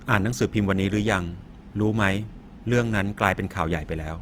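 Throughout, the speech sounds grainy and rough rather than MP3-like swirly, yet still reaches 20.2 kHz. This is likely Opus compression in music mode, fitting a rate near 24 kbps.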